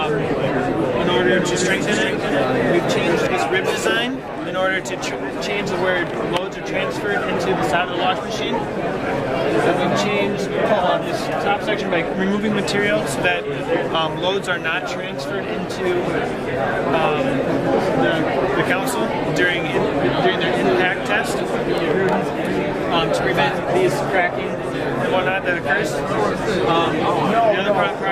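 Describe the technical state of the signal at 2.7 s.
At 2.7 s the sound is heard twice: a second, full-band copy trails the original by roughly 400 ms, about 5 dB quieter, with no decay or room colour. This doubled audio track runs from 1.39 s to 3.27 s, switching on and off abruptly at both edges. The likely cause is the same signal being captured a second time through a slower path, or an edit leaving two copies out of step.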